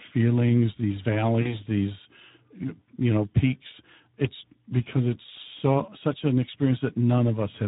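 From the start to the end, the speech carries Speex codec damage that is plainly audible. The CELP coder has too few bits to model the excitation, so voiced sounds come out hoarse and grainy, which points to a bitrate of around 11 kbps. On a spectrogram the harmonics look smeared and blurred, and any energy above 4 kHz shows as a diffuse, noise-like wash rather than clear structure.

At 1.41 s, VoIP packet loss concealed by the speech codec takes over until 1.63 s. About 40 ms of audio went missing, which fits two 20 ms frames. The decoder filled the gap by repeating its last pitch and filter settings at falling gain, so the sound is stretched into a buzzy tone or a coloured noise that fades. Because each rebuilt frame feeds the next, the voice stays thin and distorted past the gap.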